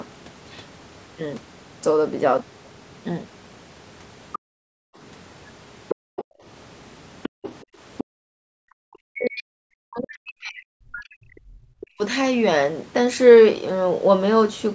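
A speech recording from a call, with content that stops at 8 kHz as the call's microphone processing band-limits it, and three echo-canceller faults. A second, fainter voice appears at 4.33 to 4.38 s, 5.88 to 6.24 s, 7.23 to 7.64 s and 7.97 to 8.04 s, roughly 10 to 20 dB below the main talker. This is most likely the other side's voice leaking through, played on the talker's loudspeaker and not fully cancelled. It differs from crosstalk or a second person in the room because it arrives in short scraps tied to the canceller's activity. Around those same moments the background is gated by the echo canceller, at 4.38 to 4.96 s, 5.95 to 6.44 s and 7.29 to 8.59 s. The room tone falls by about 40 dB while the loudspeaker plays and then returns. Because only the ambience drops, with no pumping that follows the talker's level, this is not compressor breathing or a noise gate keyed on speech. From 8.87 to 12.03 s the talker's own voice dips over roughly three seconds, falling by around 40 dB at worst. 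The likely cause is speech suppressed in double talk: both sides spoke at once and the canceller turned the talker down with the echo. Unlike packet loss, the cuts follow the overlap, not isolated instants.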